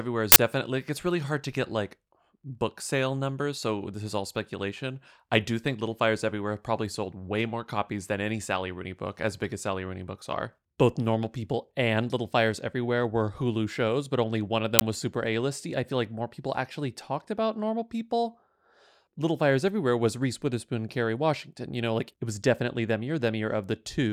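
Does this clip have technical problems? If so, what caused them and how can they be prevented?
Yes. An uninitialised buffer causes loud cracks or bursts of digital noise at 0.32–0.36 s and 14.79–14.81 s. Their lengths of 40 ms and 20 ms suggest whole blocks went to playback before any audio was written into them, so leftover memory contents played as samples. This can be prevented by zero-filling every buffer at allocation and queuing it for output only after it has been completely written.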